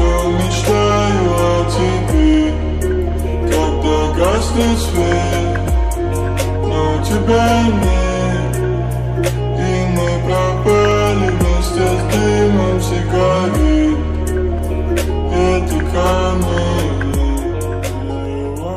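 Clock drift buffer slips run from 1.11 s to 18.25 s: a regular click roughly every 1.23 s, about fifteen in all. The likely cause is two devices whose clocks disagree by something like 150 ppm, so a buffer between them periodically drops or repeats a handful of samples.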